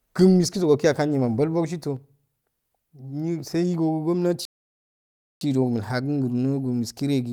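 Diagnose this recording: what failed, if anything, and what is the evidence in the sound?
Playback's where it went wrong: a playback stall. The speech cuts out mid-flow at 4.45 s and stays silent until 5.41 s, close to a full second, then picks up again. Most likely the player ran dry of data or its thread got blocked.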